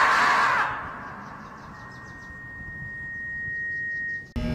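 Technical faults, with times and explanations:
1.73–4.40 s: loudspeaker feedback squeal. A steady 1.9 kHz tone swells over roughly two seconds to sit only a few decibels below the programme, as the microphone re-amplifies its own loudspeaker output. A single fixed pitch that grows by itself distinguishes it from an ordinary whine or hum.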